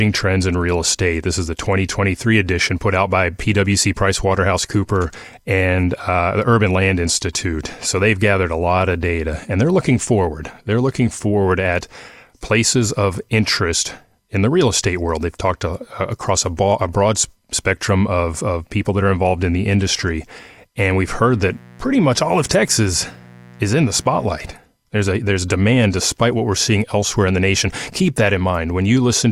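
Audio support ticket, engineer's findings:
Mains buzz, 20.85 to 24.26 s: steady, raspy buzz on 60 Hz with harmonics running up into the kHz range, roughly 25 dB under the speech. Probably a dimmer, a rectifier or a missing shield injecting spikes twice per mains cycle.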